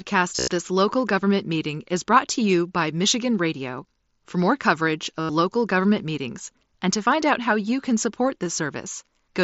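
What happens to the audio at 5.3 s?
From 5.2 to 5.29 s, just after "more coverage", a buzzy held tone replaces the speech and warbles as "local government meetings and" returns. This is concealed Bluetooth headset packet loss: about 90 ms of dropped packets were filled by repeating recent waveform.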